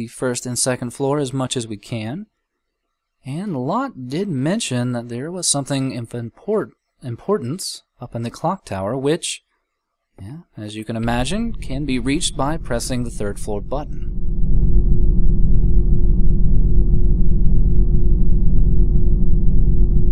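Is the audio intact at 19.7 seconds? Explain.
Yes, the audio at 19.7 seconds plays through cleanly, with no dropout, click, distortion or other fault at that point.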